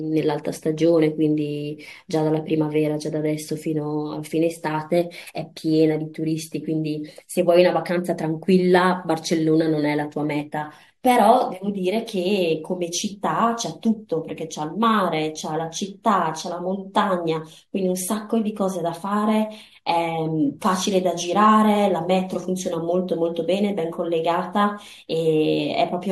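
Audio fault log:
No faults detected across the speech recording.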